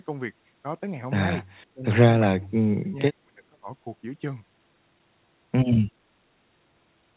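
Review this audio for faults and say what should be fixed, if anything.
Speech suppressed in double talk at 1.73–1.85 s (about a 20 dB dip) and 2.40–3.68 s (down about 35 dB). This is likely the echo canceller turning the talker down during overlap. To prevent it, tune the echo canceller for double talk or reduce loudspeaker echo at the source.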